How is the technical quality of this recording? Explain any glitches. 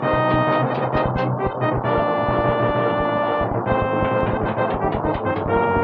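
Two sharp, isolated clicks stand out, at 1.64 s and 4.21 s. Each is a single tick with no gap or dropout around it, and in a spectrogram each would show as a thin vertical line through every frequency. The likely cause is dropped samples: around one sample went missing from the stream each time, so the waveform jumped straight to a later value. That step is far too brief to remove any audible sound, but the discontinuity produces the click.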